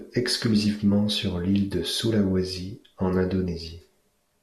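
Nothing in this speech recording stood out as a technical problem on listening.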